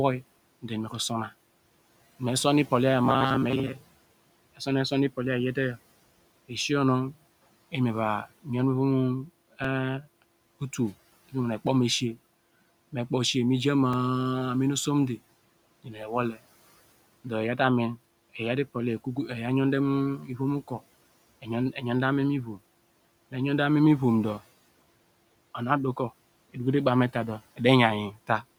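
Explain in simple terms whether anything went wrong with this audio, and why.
From 3.05 to 4.17 s the sound becomes a rigid, metallic buzz at 133 Hz. This is robotic sound from repeated short buffers: roughly half the audio is replaced by rapid repeats, likely because new audio arrived too slowly.

At 9.64 s and 13.93 s there is a repeated buffer. A tiny slice of sound plays again, once and then twice, heard as a brief click. This fits a 64-sample buffer.

Between 15.84 and 16.10 s the speech is cut by the noise suppressor. It mistook part of the speech for background noise, so those sounds come out swallowed and faint. The steady room noise underneath stays well below the speech.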